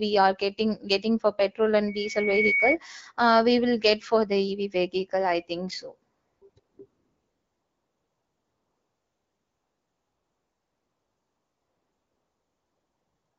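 Between 1.87 and 2.77 s, right after "getting getting for petrol" and before "uh we will get", a loudspeaker feedback squeal appears. The microphone is picking up the loudspeaker it drives, and at 2.2 kHz the loop gain tops unity, so that frequency feeds on itself. It swells over roughly half a second into a piercing single tone that ends up around 5 dB louder than the speech.

After "vehicle i think so", the sending phone decides the talker has gone quiet and stops sending speech frames, so the receiver substitutes AMR comfort noise. It cuts in at 6.13 to 6.41 s, 6.49 to 6.55 s and 6.59 to 6.77 s, then runs from 6.85 s to the end. The real background gives way to a smooth, even hiss that flicks in and out across those first gaps, with short stretches of genuine sound between them. The AMR wideband (HD Voice) codec underneath colours the speech only lightly.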